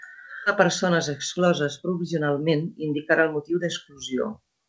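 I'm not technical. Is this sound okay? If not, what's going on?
No, there are two problems. It's a speech recording.

At about 0.46 s there is a skip ahead. Roughly a second of speech is simply gone. The playback jumps straight past it with no pause. The two sides are joined almost directly, so the listener misses that part.

From 0.61 s to 3.9 s there is a jitter buffer speed-up. The receiving side had too much audio waiting. It trimmed many tiny slices to catch up, about a third of a second in total. Speech runs about 9% faster and sounds hurried, with the same pitch.

The call went through a G.722 codec, which keeps nothing above 8 kHz.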